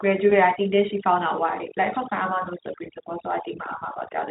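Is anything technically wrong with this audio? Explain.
Yes, there are two problems.

Overdone noise removal runs through the whole clip. The noise reducer was set so aggressively that whenever a frequency band came close to its estimate of the background noise, it pushed that band almost to nothing. The quieter parts of the speech were cut along with the noise. As a result, the background drops and breaks up into small twinkling specks.

VoIP packet loss concealed by the speech codec occurs from 0.29 to 0.34 s. The gap is about 20 ms, consistent with a single lost frame. The decoder filled it by extrapolating from the last pitch and spectral shape it had received while lowering the level. Because each frame is decoded from the state of the one before, the damage continues briefly after real audio resumes. The result is a short, fading stretch of extrapolated sound followed by a weakened or distorted recovery. 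The Speex coding itself causes little or no audible damage.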